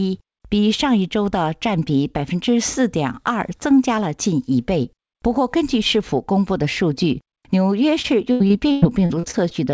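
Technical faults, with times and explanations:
8.02–9.53 s: repeated packet loss (robotic sound). The sound turns choppy, with pieces missing and gaps of up to 100 ms. Packets kept going missing, and each hole was patched by stretching the last sound, so roughly a fifth of this stretch is filler.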